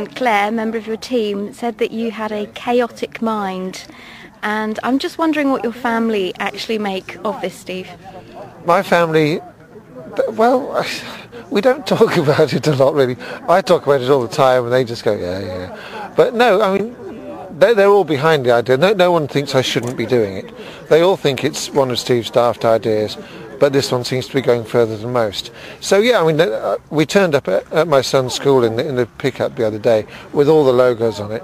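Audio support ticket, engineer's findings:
Short glitch (chirp, squawk, click or brief dropout), 16.77 to 16.80 s. Damaged data in the compressed stream: decoder misreads corrupted frames, loses sync, resyncs at the next frame header.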